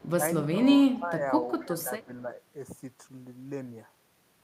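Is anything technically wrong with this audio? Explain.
Yes. Echo leak appears at 0.0 to 0.1 s, 0.95 to 0.99 s, 1.6 to 1.65 s and 2.01 to 2.05 s. These are faint delayed copies of speech, 266 ms late and roughly 25 to 35 dB down. They likely come from an echo canceller missing loudspeaker pickup. On a spectrogram they show as weak, delayed duplicate traces.

Speech suppressed in double talk appears at 0.98 to 1.26 s, dipping about 10 dB, and at 1.64 to 2.3 s, dipping about 5 dB. This is likely the canceller ducking the talker during overlap. The waveform's envelope sags noticeably there.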